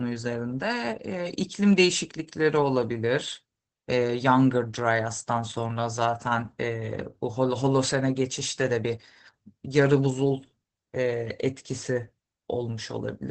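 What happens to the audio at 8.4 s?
At 8.4 s you're hearing the Opus voice compression that runs through the whole clip. The SILK coder cuts the band to about 8 kHz and codes the excitation coarsely, consistent with a rate around 12 kbps, so the speech comes out muffled, a bit hoarse and slightly robotic.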